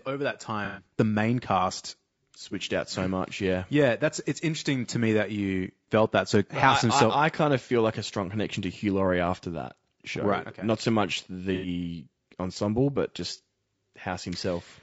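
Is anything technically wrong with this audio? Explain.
Yes, there are two problems. Throughout the speech, the encoding was likely a low-delay AAC compression such as AAC-ELD at a low rate, consistent with about 32 kbps. Its short frames resolve pitch harmonics poorly, so the voice sounds plainly rough and grainy, with noise between harmonics and a dulled, synthetic-sounding top band.

AAC frame loss with concealment occurs at 0.65–0.83 s and 11.54–11.68 s. The decoder lost a few consecutive frames, roughly 120 ms and 90 ms, and patched them from the last good spectrum, producing brief smeared, noisy, phasey patches in the speech.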